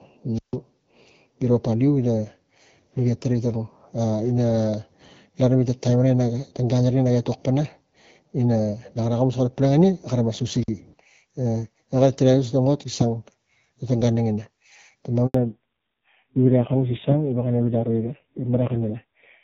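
Right at the start, 0.34 to 0.56 s, there's a wireless microphone squelch dropout: the radio link fades, hiss swells, and the receiver mutes for about 150 ms. It happens again, shorter, at 10.60 to 10.69 s, with roughly 50 ms of near silence. At 15.26 s a handover gap cuts the speech dead for 80 ms while the call hops networks, so whatever was said there is simply gone. From 15.34 s to the end it's a fallback to narrowband: nothing above 4 kHz survives, and the voice turns dull and raspy, which fits a drop from HD Voice down to a low-rate AMR narrowband mode. Before that switch, the wideband codec adds only light coloration.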